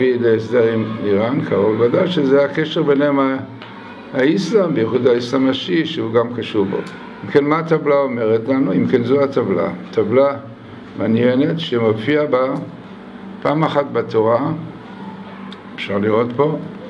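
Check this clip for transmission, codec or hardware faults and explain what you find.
No transmission, codec or hardware faults can be heard.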